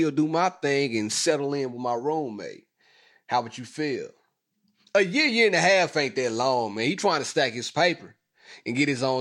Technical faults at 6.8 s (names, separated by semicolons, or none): none